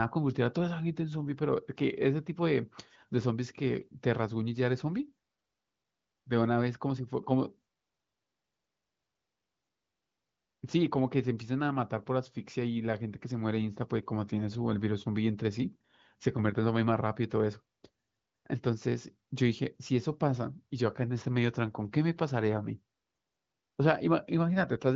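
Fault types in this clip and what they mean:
The speech carries no audible faults; it has passed through the AMR wideband (HD Voice) codec at a high rate consistent with 23.05 kbit/s, so any coding damage is faint at most, and the band stops at about 7.6 kHz.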